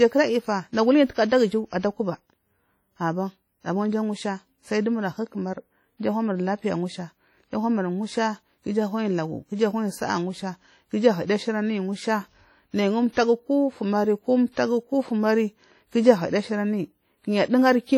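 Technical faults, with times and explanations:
Throughout, WMA compression: heavy ringing, washy smearing and hiss that swells with the speech, likely from a transform codec at a low bitrate around 32 kbps.
13.13–13.17 s and 14.53–14.57 s, pre-echo: a short hiss of about 45 ms precedes each sharp onset, because block-wide quantisation noise leaks into the quiet before the attack.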